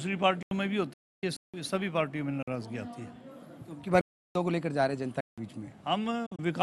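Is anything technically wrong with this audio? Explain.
Yes. The audio has two kinds of fault: repeated blocks of digital silence and two digital broadcast dropouts.

Blocks of digital silence occur at 0.43–0.51 s (85 ms), 1.37–1.54 s (171 ms), 2.43–2.48 s (49 ms), 4.01–4.35 s (341 ms) and 5.21–5.38 s (171 ms). The output buffer was probably not filled in time, so zeros were played. The lengths of four of them step in powers of two, which fits buffers of 4096 to 16384 samples. Each hole starts and ends abruptly.

The digital broadcast dropouts are at 0.93–1.23 s and 6.26–6.42 s. The receiver muted while it had no valid frames, using a quick 8 ms fade. The first is a single hole of 288 ms. The second is a cluster of short holes spread over about 144 ms, the longest 48 ms. The missing sound is not recovered in either case.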